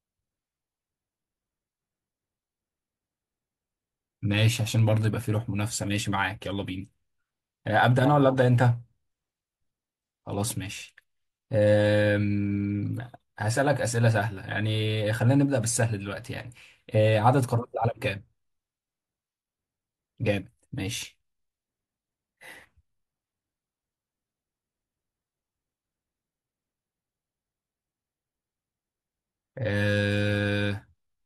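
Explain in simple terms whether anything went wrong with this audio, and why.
Between 4.33 and 5.25 s, five short ticks of CD scratch ticks break into the speech, each under a millisecond. A scratch hits the same spot once per disc turn, so the ticks come evenly, about five a second. Random digital clicks would be irregularly spaced.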